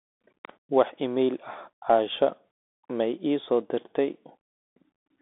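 The whole speech goes through a Bluetooth CVSD headset codec. Its one-bit up-down stepping leaves grainy hiss and scratchy s sounds, and nothing above 3.8 kHz survives.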